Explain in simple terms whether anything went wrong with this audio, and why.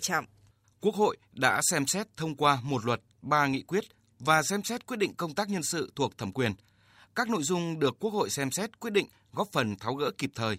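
Nothing went wrong; I hear no faults here.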